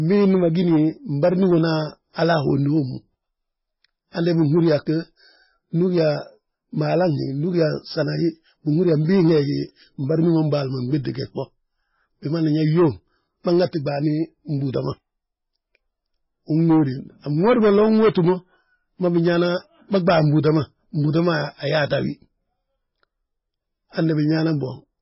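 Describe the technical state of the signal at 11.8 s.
At 11.8 s, as across the whole clip, heavy damage is present, likely from MP3 compression at a bitrate near 16 kbps. The encoder has cut everything above 5.6 kHz and drops weak frequency lines frame to frame, so the speech sounds dull, watery and swirly, with chirpy sibilants.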